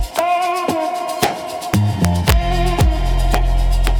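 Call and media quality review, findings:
Integer overflow: sharp cracks on loud peaks at 0.19, 1.23, 2.81, 3.34 and 3.87 s, plus a sustained run of cracking from 1.74 to 2.32 s. Peaks exceed the integer limit by only about 0 to 2 dB but wrap to the opposite sign instead of saturating. Probable component: a gain or mixing stage summing in fixed point without clamping. Fix: saturating arithmetic or headroom before the sum.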